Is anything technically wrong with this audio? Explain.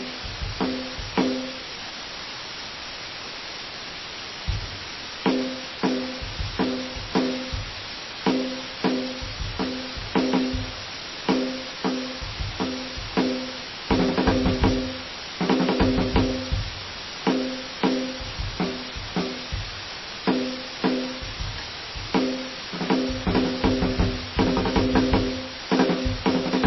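Yes. Throughout the music, a constant, even hiss sits almost as loud as the music itself, with no distortion. This is low bit depth with dither: the signal has only about 4 bits, and dither added before rounding turns the coarse rounding error into steady white noise.

The music also sounds watery and swirly, with nothing above 5.8 kHz and smeared attacks. The likely cause is heavy MP3 compression, consistent with a very low bitrate near 23 kbps. Starved of bits, the encoder cuts the treble and drops weak frequency components that flicker between frames.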